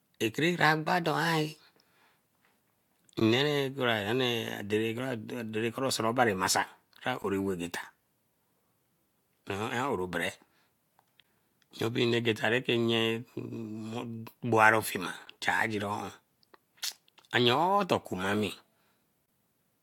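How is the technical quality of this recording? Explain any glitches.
The speech is broken by five short silent holes, a fault known as a gap between stream segments. The time stamps of consecutive segments, spaced about 4 s apart, fail to meet exactly, so the player pads each junction with silence. The dropouts fall at 3.20, 7.22, 11.23 and 15.26 s, each lasting 15 to 16 ms, and from 19.26 to 19.28 s for 22 ms. Each one is a hard-edged tick of nothing. No audio is lost, and the regular spacing gives away the segment boundaries.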